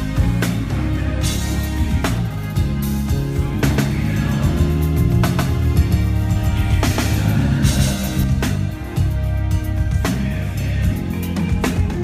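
From 3.64 s to 8.24 s, a second capture path or an edit likely held a duplicate copy out of step, producing a doubled audio track. The copy trails by roughly 150 ms at about the same loudness, with no decay or room colour, and cuts in and out abruptly.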